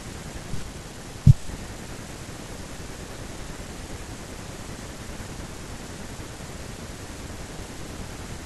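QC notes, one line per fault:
Nothing to log for this speech clip. No fault was heard at any point.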